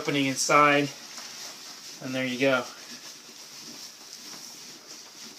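No technical faults can be heard anywhere in the clip. Nothing breaks into the sound at any point, with no dropouts, clicks or sudden changes in level.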